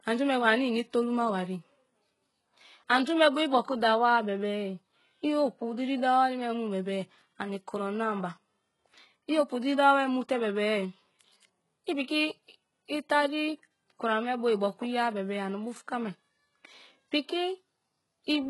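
HE-AAC compression, heavy and present throughout the speech: the treble above the midrange sounds synthetic, with sibilants gritty and lispy and nothing at all above 11.5 kHz. This is likely spectral band replication, which copies lower bands upward under a coarse envelope, fitting a bitrate near 12 kbps.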